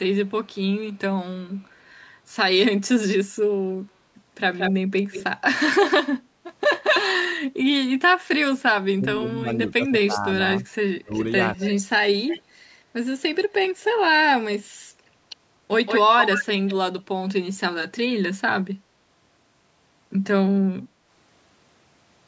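At 0.26 to 0.99 s there is an echo leak: a faint copy of the speech, roughly 40 dB down, trailing by 231 ms. The likely cause is a far-end echo canceller that did not fully remove what its loudspeaker fed back into its microphone. The leak returns far stronger, only about 5 dB below the speech, from 4.54 to 5.93 s at a 176 ms delay. A fixed lag like this separates it from room reverberation, which smears continuously rather than repeating a distinct copy.

From 8.96 to 12.11 s, the speech is suppressed in double talk. With both sides talking, the canceller likely could not tell its own talker from the returning echo and turned everything down. The speech dips and cuts in pieces by up to about 20 dB, for roughly a second and a half in total. Unlike a network dropout, the gaps track the overlapping talk rather than falling at random.

Within and just after that stretch, echo fragments slip through: a brief one at 10.60 to 10.65 s (176 ms delay, about 25 dB down), then 11.20 to 11.71 s and 12.27 to 12.42 s (both 244 ms, about 15 and 20 dB down). 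A final strong leak at 15.86 to 17.02 s sits about 5 dB below the speech at 172 ms.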